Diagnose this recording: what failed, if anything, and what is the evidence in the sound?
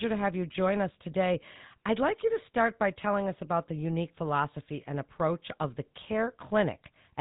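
GSM full-rate codec damage runs through the whole clip at the codec stage. The speech has a plainly audible buzzy, gravelly roughness, and the spectrum stops at about 3.8 kHz, so sibilants lose their edge. Both point to the early GSM full-rate scheme, which fits a 13 kbps stream. It rebuilds the voice by passing a coarse, regularly spaced pulse excitation through a vocal-tract filter, keeping only a third of the excitation samples, which produces the buzz.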